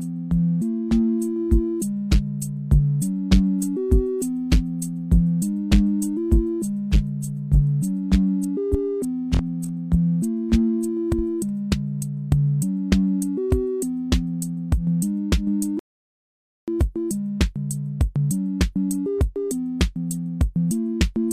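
A rebuffering stall interrupts the audio at 15.79 s. The sound drops to silence and stays there until 16.68 s, then picks up exactly where it left off, with nothing skipped or repeated. The playback ran short of downloaded data and had to pause until more arrived. No material is lost, but the gap adds about 0.88 s to the running time and breaks the flow at that point.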